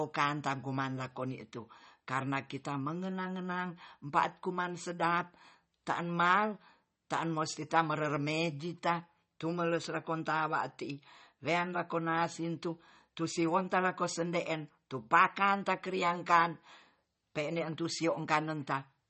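From start to finish the speech carries a watery, swirling texture. Nothing is heard above 8.4 kHz, so s sounds lose their crispness and the top end feels dull. This is likely MP3 compression, and the damage is plainly audible. The encoder seems starved of bits, which fits a rate around 32 kbps. It cuts the treble at a fixed point. Weak frequency lines drop in and out between frames, giving the swirl. Consonant onsets sound smeared.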